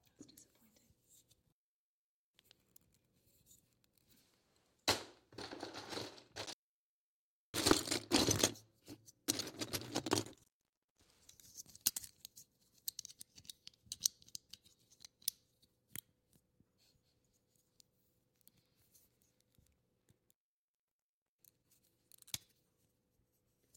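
An intermittent contact, a loose connection briefly opening, cuts the sound at 1.42–2.45 s, 6.40–7.67 s, 10.24–11.14 s and 19.96–21.76 s, with gaps of 0.82, 1.01, 0.53 and 1.07 s. Each gap has crackle at its edges, shown as vertical spectrogram streaks around a collapsed waveform.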